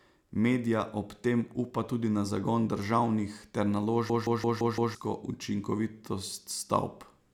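Speech with a system hang loop from 4.10 to 4.95 s, right after "na zagon državnih ter". One 171 ms slice repeats identically five times, a machine-gun stutter at 5.86 Hz that fits an 8192-sample buffer, and about a second of audio is lost. Loss concealment would smear and fade instead.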